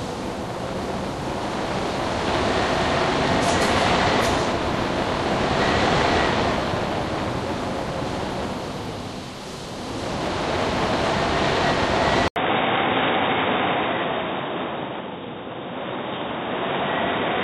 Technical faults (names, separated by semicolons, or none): input switched to a poorer device